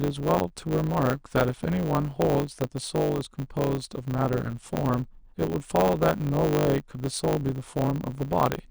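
Speech with a block size mismatch (truncated) throughout: a steady 100 Hz buzz and speech running 1.09 times fast, yet with its timbre kept, unlike a sample-rate error.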